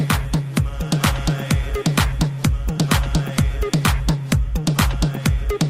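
Nothing goes wrong anywhere in the clip, so there's no technical fault to point to at any moment.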